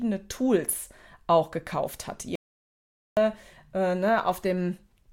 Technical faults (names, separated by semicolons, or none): audio dropout to silence